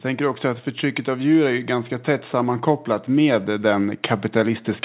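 From 1.04 s, right after "tänker också att", automatic gain rising sets in and continues to the end: the gain control judged the input too quiet and raised its gain gradually, so the speech and background noise swell together within the call's narrowband, 4 kHz-limited sound.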